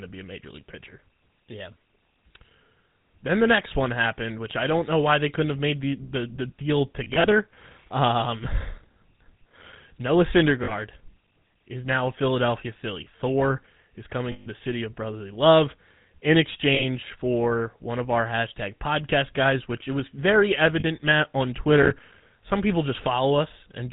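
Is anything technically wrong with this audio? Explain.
Yes. The speech carries three kinds of fault.

Throughout, the GSM full-rate codec colours every word. It is heard as a buzzy, gravelly roughness with nothing above 4 kHz, consistent with the 13 kbps full-rate coder. The coder models the vocal tract and drives it with a regular pulse excitation that keeps only every third sample, so fine detail is rebuilt coarsely. On a spectrogram the energy stops in a hard ceiling at 4 kHz, and harmonics look smeared and grainy rather than clean.

Lost GSM frames occur at 7.04 to 7.26 s, 10.64 to 10.73 s, 14.32 to 14.47 s, 16.74 to 16.84 s and 20.80 to 20.85 s. The missing audio runs about 100, 40, 140, 60 and 40 ms, and the first episode is scattered over 200 ms, with the longest run about 40 ms. The decoder repeats the last good frame's settings, so each gap becomes a brief rough, metallic ring. 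On a spectrogram these appear as frozen, smeared horizontal bands. The waveform shows a repetitive stretch.

Processor overload crackle runs from 8.78 to 9.76 s. Around thirty deadlines are missed repeatedly across the stretch, and each miss leaves a gap of silence that fits a buffer of roughly 5 ms. The result is a gritty, tearing crackle riding on the speech that stops once the load eases. The waveform shows many tiny dropouts with hard edges. The spectrogram shows thin vertical broadband streaks at every gap edge across that second.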